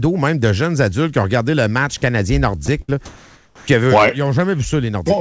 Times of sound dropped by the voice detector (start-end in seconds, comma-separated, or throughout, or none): 2.66-2.68